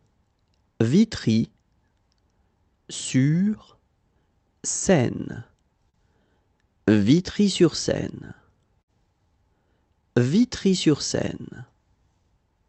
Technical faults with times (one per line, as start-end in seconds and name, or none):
5.89-5.97 short stall from a late packet
8.82-8.90 burst of packet loss